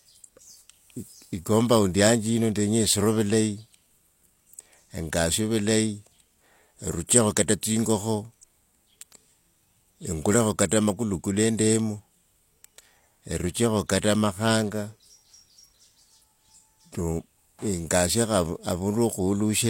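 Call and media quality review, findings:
Pre-echo, 10.69 to 10.71 s. Transform codec block straddles a sharp speech onset; quantisation noise sized for the loud attack spreads back across the block's quiet lead-in. Result: brief hiss about 25 ms ahead of the attack, onset softened and smeared.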